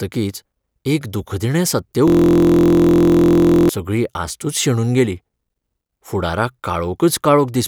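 A steady, mechanical buzz replaces the speech from 2.08 s to 3.69 s, starting right after "एक दूखदिणें सत्य" and clearing just before "सगळी आस्तूच शेणून गेली". This is a system hang loop. The computer or driver stalled while the audio hardware kept replaying its ring buffer. A 23.22 ms slice repeated about seventy times, which fits a 1024-sample buffer. Because the slice is so short, the repeats fuse into a tone at 43.1 Hz instead of a stutter.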